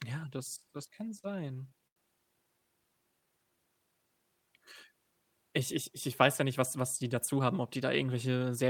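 From 0.77 to 1.97 s the speech shows repeated stalls, a stutter. Packets arrived late, and the jitter buffer ran dry twelve times. Each gap was filled by stretching the last sound, the longest for 87 ms. About a fifth of that stretch is filler. Nothing is lost, but the speech drags and catches.

From 3.12 to 3.57 s comes a jitter buffer slow-down. The buffer was low, so the receiver repeated single pitch periods to rebuild its reserve. This adds 78 ms. The speech runs at 85% speed at the same pitch and sounds drawn out.

From 5.52 to 7.49 s there is a jitter buffer speed-up. The buffer held more than its target, so the receiver trimmed short pitch-period slices again and again. About a tenth of a second goes. The speech runs at 105% speed, unchanged in pitch, and sounds slightly hurried.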